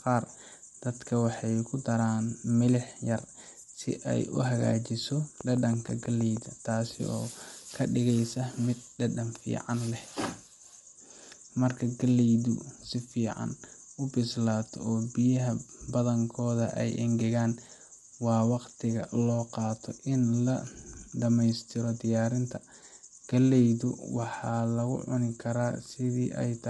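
From the start, the speech sounds rough and grainy, with noise filling the gaps between harmonics. This is likely low-delay AAC compression (AAC-ELD), at a bitrate around 32 kbps, whose short frames resolve pitch poorly. A spectrogram shows smeared harmonics and nothing above 11.6 kHz.

From 5.41 to 6.38 s, a train of clicks ticks over the sound at a regular 6.2 per second, roughly seven in all, each peaking a few decibels above the speech. The probable source is electrical interference or a faulty connection or power supply. The waveform shows evenly spaced, similarly shaped spikes, and the spectrogram shows thin vertical lines.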